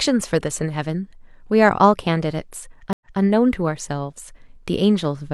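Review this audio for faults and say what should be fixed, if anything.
Stream reconnect, 2.93–3.20 s: the connection dropped and a new decoder started mid-stream, causing 80 ms of silence before the speech resumes 0.19 s earlier, repeating material. Buffering enough to ride out brief drops, and resuming exactly where playback stopped, would prevent this.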